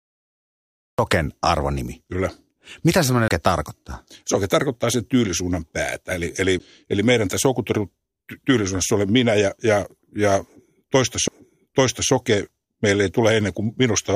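The speech comes in late as a cut-off start: digital silence until about 0.99 s, then it drops straight into the middle of a sound with no natural attack. A CD skip hits at 3.28 to 3.31 s, with a mute of a few tens of milliseconds before the audio resumes from a different spot on the disc. It happens again at 11.28 s, where the gap is almost instant and comes across as a tick and a jump.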